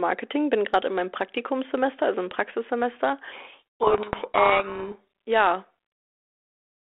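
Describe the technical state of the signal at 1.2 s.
At 1.2 s the signal is intact, with no fault present; the speech is carried through the G.726 ADPCM telephone path at 32 kbit/s, with its usual 300 Hz to 3.4 kHz band.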